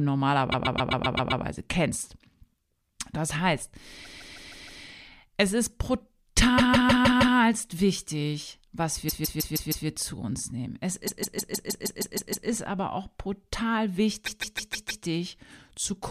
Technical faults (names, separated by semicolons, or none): repeated frames